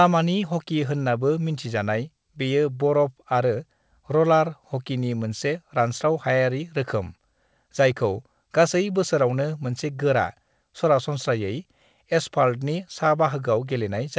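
There are no technical faults to describe in this speech; it comes through a call path working as expected, with nothing above 8 kHz.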